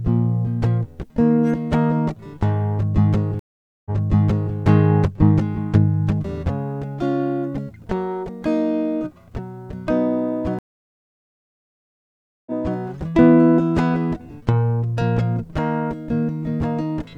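At 3.39 s the music drops out for 0.46 s and, when it returns, repeats about 0.7 s already heard, with the fault ending at 4.55 s; at 10.59 s a 1.875 s gap is followed by a 0.33 s repeat, with the fault ending at 12.79 s. These are stream reconnects: the link broke, the player reconnected, the server resent buffered audio, and a fresh decoder restarted mid-stream.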